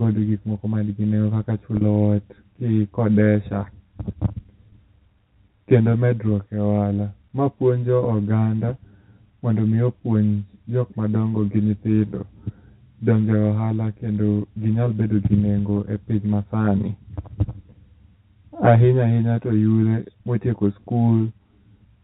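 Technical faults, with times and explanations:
Throughout: channel delay (comb filtering). One channel arrives roughly 10 ms late and the two are summed, so components common to both cancel at evenly spaced frequencies starting near 50 Hz. The result is a steady hollow, phasey colour. Unlike packet loss, it never comes and goes.
1.77 to 1.81 s: packet loss with pitch repetition. About 40 ms of the speech went missing and the receiver filled the gap by repeating the last pitch period, fading it out. This is heard as a brief held, buzzy tone rather than a click or silence.
4.71 to 4.72 s: packet loss with pitch repetition. A shorter gap of about 20 ms was bridged the same way. It gives only a slight sustained buzz, shorter than the loss at 1.77 s, and it is localised rather than the constant colour of the comb filtering.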